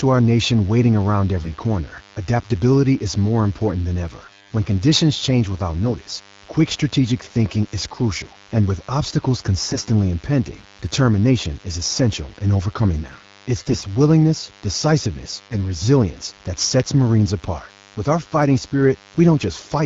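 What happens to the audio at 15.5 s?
At 15.5 s the speech is hit by AMR bit errors, running from 15.44 to 15.58 s. Over that span of about 150 ms, roughly seven 20 ms frames' worth, around one bit in twenty in the less protected part of each frame arrived flipped, while the checksum over the critical bits still passed. The decoder therefore placed excitation pulses wrongly and applied wrong pitch, gain and spectral values. Pitch and loudness roughly hold, but the sound turns hoarse, scratchy and gargly for that instant.

Underneath, as everywhere in the clip, sits the DECT cordless phone buzz. A nearby handset or base transmits a radio burst every 10 ms, and the audio circuitry rectifies it into a thin, steady 100 Hz buzz rich in harmonics. Its level sits well below the speech, roughly 30 dB down, so it is heard as a constant background rasp through the damaged stretch rather than as part of it.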